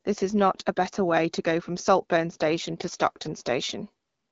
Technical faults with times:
2.29-3.58 AMR rate drop

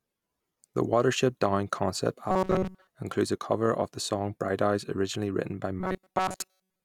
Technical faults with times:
2.31-2.87 robotic sound from repeated short buffers
5.80-6.85 robotic sound from repeated short buffers

